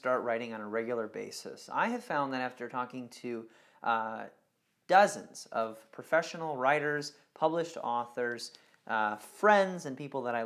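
Nothing is technically wrong with the audio in this clip.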